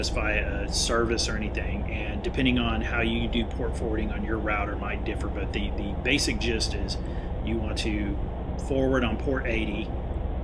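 No technical faults can be heard anywhere in the signal; it stays steady and intact for its whole duration.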